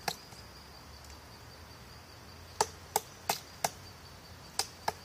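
No technical faults can be heard at any point in the audio.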